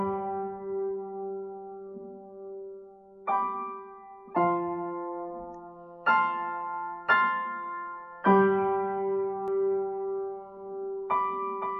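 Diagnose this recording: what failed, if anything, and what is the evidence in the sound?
From 9.48 s onward a dry copy, about 5 dB quieter, trails half a second behind: a doubled audio track, likely captured again through a slower driver path.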